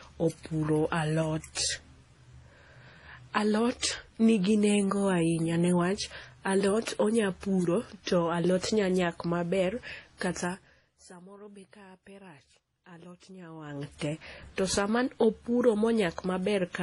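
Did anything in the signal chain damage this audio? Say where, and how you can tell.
Yes, at the codec stage: the speech was likely transcoded between lossy codecs, with MP3-style smearing compounded by HE-AAC's own artefacts throughout. Nothing survives above 11.4 kHz, the lower cut-off in the chain, and the stacked artefacts suggest a low bitrate around 32 kbit/s at each step.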